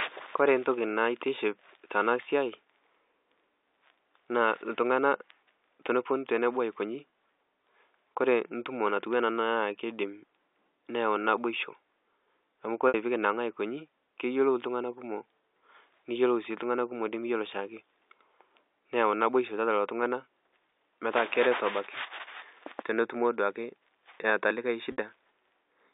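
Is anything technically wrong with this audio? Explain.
Yes. There are three dropouts, all packet loss with pitch repetition. At 7.11 s, just after "teneponu tenebo aikonyi", about 20 ms is lost. From 12.88 to 12.94 s, before "piikinang'a aikonyi keyiolou iltungana", about 60 ms is lost. From 24.92 to 24.98 s, after "eata likae", another 60 ms is lost. The receiver fills each gap by repeating the last pitch period. The short one sounds like a brief buzzy hold. The longer two fade toward silence before the sound resumes. They fit one and three missing 20 ms packets.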